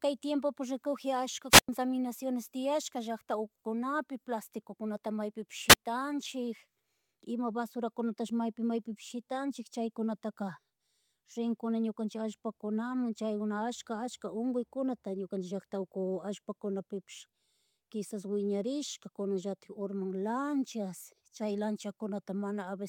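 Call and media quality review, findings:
Wireless microphone squelch dropout, 1.50–1.69 s (100 ms mute) and 5.69–5.75 s (hiss, barely any mute): RF fade trips receiver squelch. Hiss swelling before the hole separates it from packet loss.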